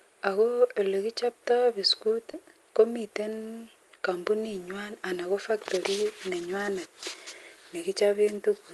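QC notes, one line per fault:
2.31–2.35 s, short concealed packet loss: 20 ms just after "akoyelekichoptoi biskut" never reached the decoder; the receiver stretched the preceding sound to cover it, causing a brief smear.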